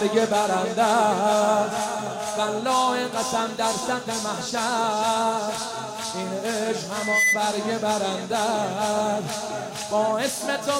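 At about 6.95 s a loudspeaker feedback squeal kicks in. It's a 2 kHz tone that builds over roughly a third of a second and rides about 5 dB above the sound until it cuts at 7.42 s.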